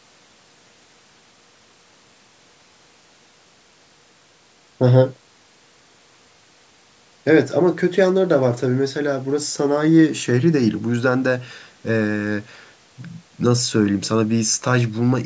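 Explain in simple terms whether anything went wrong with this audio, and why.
Nothing went wrong here; the speech just has the slightly trimmed, thin sound of a call microphone, which cuts the deepest bass and everything above 8 kHz, and that's exactly what a normal call sounds like.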